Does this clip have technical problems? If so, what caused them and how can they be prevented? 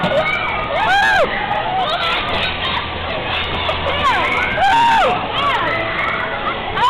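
No, there are no technical faults to point to here. Nothing in the audio calls for a cause or a preventive fix.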